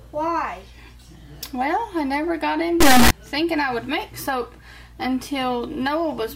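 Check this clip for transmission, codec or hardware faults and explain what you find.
One fault is present, a brief sample-format error. From 2.81 to 3.11 s, integer read as float: 32-bit integer samples decoded as 32-bit float jump between near-zero and clipping, producing a loud buzzing square wave, a railed waveform and a broadband spectrogram block.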